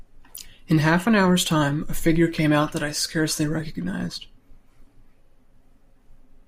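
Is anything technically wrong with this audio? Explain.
Yes. From 5.25 to 5.38 s there are repeated frames: a 64 ms block of compressed frames was delivered twice more, so the decoder replays it and the speech stutters. Unlike a dropout, nothing is lost. The clip instead grows longer by 128 ms.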